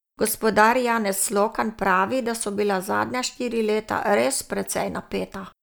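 No technical faults can be heard in this recording.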